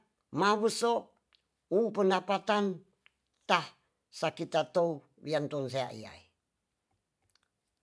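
Speech recording with no audible technical faults.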